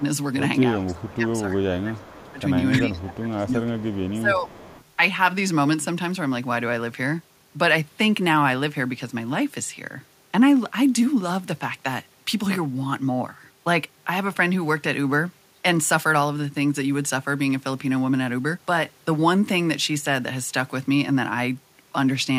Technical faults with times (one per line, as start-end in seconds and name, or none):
0.79-2.41 speech suppressed in double talk
2.25-2.41 echo leak
2.80-4.48 speech suppressed in double talk
3.85-4.21 echo leak
4.49-4.84 echo leak